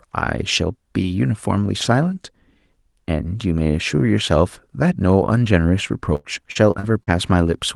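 From 6.15 to 7.10 s, repeated packet loss left a handful of holes, the longest 84 ms, filled by stretching earlier sound, so speech turns choppy and robotic.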